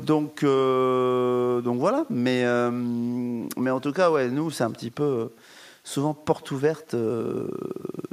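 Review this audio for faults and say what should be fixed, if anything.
There's echo with no canceller running through the whole clip: every phrase is trailed, about a tenth of a second later, by a faint, thin copy sitting about 23 dB down. That's the far end's loudspeaker feeding its own microphone with nothing stripping it out. Turn on acoustic echo cancellation at that end, or have them wear a headset.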